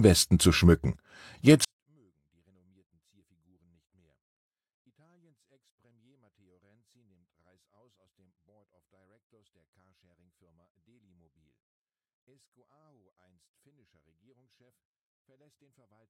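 From about 1.65 s to the end, the speech falls into a 24-bit alignment error: samples sitting in the low 24 bits of a 32-bit word get read as full 32-bit values, so the sound stays clean but drops about 48 dB at once, almost inaudible.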